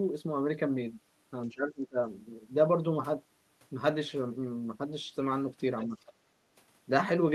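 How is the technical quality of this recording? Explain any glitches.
The speech is marred by echo-control glitches: two brief suppressions of the talker and two faint scraps of a second voice.

From 1.46 to 1.97 s the speech sinks by about 20 dB, then recovers. This is speech suppressed in double talk, likely an echo canceller turning everything down while both sides spoke at once.

At 5.88 to 5.98 s there is a shallower dip of about 5 dB, the same double-talk suppression, briefly pulling the talker down.

From 5.78 to 5.86 s and 6.06 to 6.12 s a second voice intrudes, about 20 and 25 dB below the speech. This is the other side's voice leaking through, likely loudspeaker playback the echo canceller failed to remove from the microphone.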